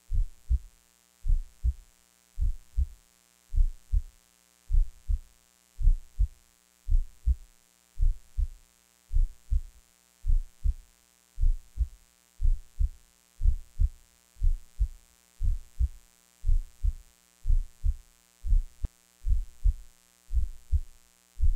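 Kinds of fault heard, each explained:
Mains buzz: switching spikes from a dimmer, rectifier or unshielded line enter the signal path twice per 60 Hz cycle, adding a ladder of 60 Hz harmonics up into the kilohertz range. It sits under the whole clip as a steady raspy buzz, roughly 40 dB below the sound.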